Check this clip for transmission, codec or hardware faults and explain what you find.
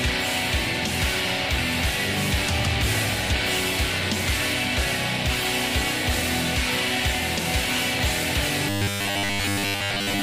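Two faults turn up, one after the other.

From 2.26 to 8.05 s there's a train of clicks, around fifty of them at about 8.1 per second, spaced unevenly. They're similar-shaped pulses sitting a few dB above the audio, so they tick and pop over everything, gaps included. That pattern most likely comes from electrical interference or a faulty connection or power supply, injecting the same spike again and again.

From 8.69 s to the end, the audio turns into robotic sound from repeated short buffers. The playback side is looping a 10 ms slice to cover for audio that isn't arriving, and it skips most of the real material. That fixed loop imposes a 100 Hz buzz, giving a stiff, metallic drone that only loosely tracks the underlying sound, likely because of buffer underruns in the transmission chain.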